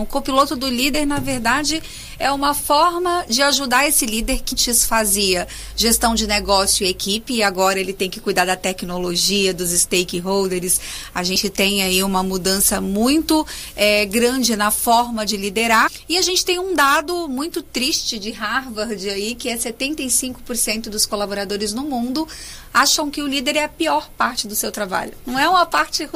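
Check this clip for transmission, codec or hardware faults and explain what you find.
There is one fault here: compressed frames skipped at 0.93, 4.51–4.53, 11.35 and 15.86–15.88 s. Whole coded frames never reach the output, so the audio jumps ahead, slightly at 0.93 and 11.35 s and by a few tenths of a second at the other two. Each join is a sudden jump forward, unlike a dropout's silent gap.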